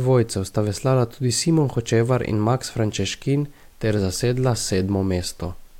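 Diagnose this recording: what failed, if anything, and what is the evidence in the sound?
No fault is audible.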